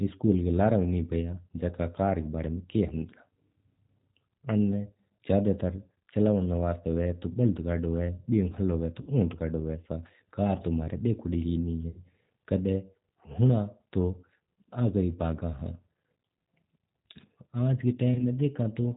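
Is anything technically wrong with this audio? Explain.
Yes. Throughout the speech sounds band-limited, slightly rough and synthetic. That is plainly audible G.729 coding at 8 kbit/s, which rebuilds speech from a vocal-tract model and sparse pulses and removes everything above 4 kHz.

VoIP packet loss concealed by the speech codec produces three fading patches of stretched, buzzy or noisy sound: 9.01–9.11 s, 11.89–11.99 s just after "कौन ही", and 18.14–18.23 s just after "आज का". The first two cover 60 ms each, which fits two lost packets, and the third covers 30 ms, which fits one. In each gap the decoder stretches its last pitch and filter while lowering the gain.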